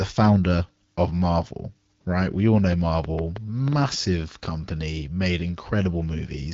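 Just after "all know", from 2.73 to 4.46 s, a train of clicks ticks unevenly at about 3.5 per second: some seven pops around 10 dB above the speech, likely interference or a faulty connection. Each shows as a sharp waveform spike and thin vertical spectrogram stripe.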